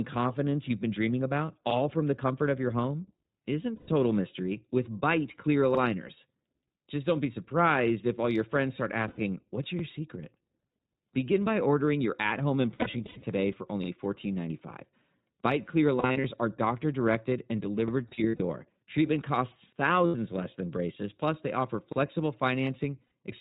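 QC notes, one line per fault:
Throughout: iLBC codec. Nothing above 4 kHz, with a slightly rough, synthetic edge from coding each 20 ms frame on its own, which fits the 15.2 kbps mode. This is codec roughness, not a plain low-pass dull.
3.76–3.89 s, 9.08–9.20 s, 20.06–20.16 s: lost iLBC frames. Gaps of 120, 100 and 80 ms are filled with a held, buzzy vowel from the repeated last pitch cycle. The last gap comes just before "less than braces plus". Clean speech snaps back at once.
12.74–13.24 s, 16.00–16.26 s, 18.08–18.41 s: lost iLBC frames, scattered. The first follows "ordering your at home" and the second precedes "are doctor directed and". Losses totalling 280, 160 and 200 ms are spread across each span, in runs of up to about 70 ms, giving a flickering, breathy warble instead of one held tone.
9.79 s: overlapping chunks. A 44 ms piece of real audio plays twice at a chunk join, which fits 4 s chunks. 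It is a true stutter with no synthetic buzz, which tells it apart from frame loss.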